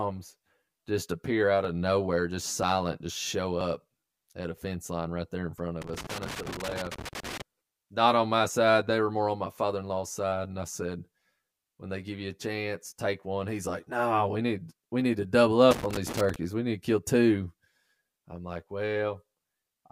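Overlap between stream segments first appears at 1.65–1.67 s, then 2.63–2.65 s, 3.61 s after "just show", 4.58 s between "at a" and "line right there in", and 5.58 s after "line right there in", roughly once per second, matching one-second segments. Where adjacent segments' time stamps overlap, playback discards the shared stretch even though that speech wasn't duplicated, so 8 to 22 milliseconds vanish and the waveform jumps. Each gap is a small click or skip.

Loose connector crackle then runs from 5.82 to 7.42 s: a worn or dirty contact rapidly making and breaking chops the signal into an irregular burst of scratchy crackle. One more segment overlap skip follows at 7.52 s, on the same one-second rhythm. The crackle returns at 15.71–16.36 s as a shorter scratching burst.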